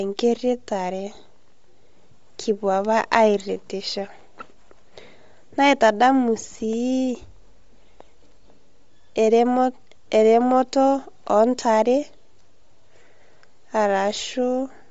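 Across the clip the speech carries a plainly audible breathy, grainy edge, and nothing remains above 7.7 kHz. This is likely Bluetooth LC3 compression: the codec drops upper-band detail and fills it with noise, which fits a 32 kbps stream in 10 ms frames.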